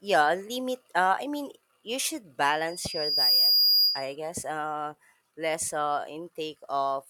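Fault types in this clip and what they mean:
Loudspeaker feedback squeal: the mic is catching its own speaker, and around 4.9 kHz the loop gain tips past one, so a pure tone swells over most of a second after "i mean you should", ends up roughly 10 dB above the speech, and drops out before "uh less uh".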